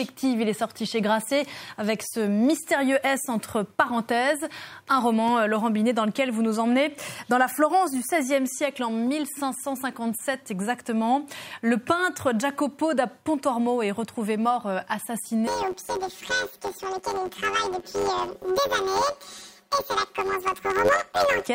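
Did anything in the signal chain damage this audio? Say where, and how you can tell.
Yes. From 15.47 s to 21.47 s, a robotic buzz near 94 Hz with no clear octave shift points to planar audio read as interleaved at the buffer stage. Each 10.67 ms block, consistent with 512 samples, replays its left then right halves at double speed.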